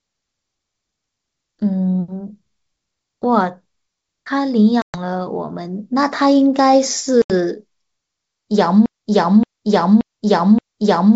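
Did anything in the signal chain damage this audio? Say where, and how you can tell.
Yes, at the network stage. There's packet loss on an ADPCM call: hard-edged silent holes at 4.82 to 4.97 s (about 120 ms lost) and 7.22 to 7.31 s (about 80 ms). The speech returns slightly distorted, because the decoder's predictor and step size drifted from the sender's. It settles within tens of milliseconds.

From 8.86 s to the end there's a broken-record loop. A 0.58 s fragment repeats exactly, back to back, four times, so the speech that belonged there is gone. The likely cause is a stalled player or stream buffer that kept resending the last piece it held.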